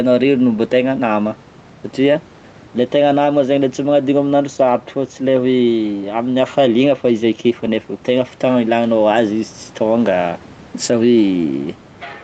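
It's a speech recording with gain pumping running the whole way through. The level keeps breathing by around 5 dB, so loud and quiet stretches sit squashed together. The likely cause is input gain set well too high, with a fast limiter or compressor clamping down on each louder syllable. The audio also stops at 8 kHz from the call path, and the room noise sits about 30 dB under the speech.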